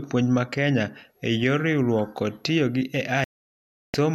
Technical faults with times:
3.24-3.94 digital broadcast dropout

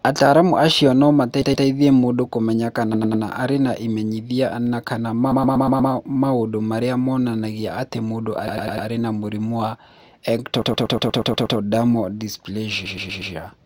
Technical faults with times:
1.41-1.65 repeated frames
2.93-3.23 repeated frames
5.31-5.91 repeated frames
8.47-8.87 repeated frames
10.61-11.57 repeated frames
12.85-13.33 repeated frames

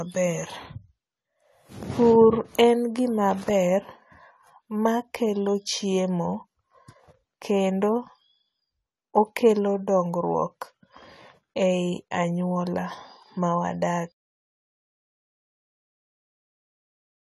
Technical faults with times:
0.00-17.30 AAC compression

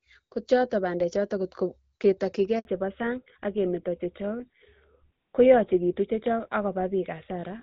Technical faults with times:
2.59-2.65 handover gap
2.65-7.62 fallback to narrowband

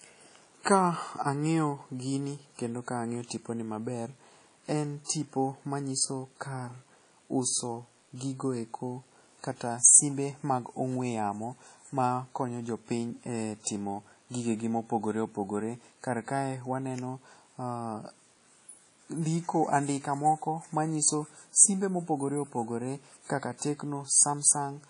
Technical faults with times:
0.00-24.90 WMA compression
5.05-5.09 pre-echo

